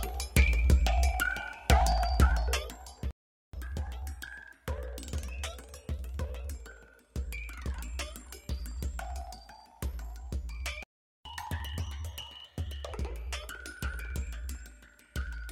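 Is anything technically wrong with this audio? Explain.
Yes. The audio has two playback stalls, each followed by a stretch of catch-up at higher speed.

Playback stall: at 3.11 s the output drops to silence until 3.53 s, a gap of about 0.43 s. It happens again from 10.83 s to 11.25 s, about 0.42 s. The sound stops abruptly mid-flow and then resumes where it left off. The likely cause is that the player's buffer ran dry or its audio thread was blocked, so nothing reached the output until it recovered.

Catch-up at higher speed: after each stall the player plays its backlog faster by resampling, which raises speed and pitch together. From 3.53 s to 6.53 s it runs at 1.1 times normal speed, about one and a half semitones sharp. From 11.25 s to 12.93 s it runs at 1.25 times, around four semitones sharp. Each time, speed and pitch then return to normal.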